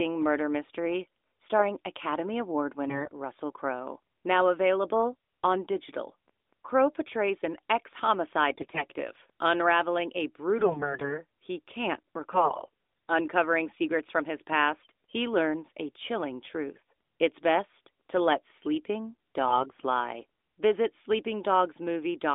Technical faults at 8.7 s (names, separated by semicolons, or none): AMR bit errors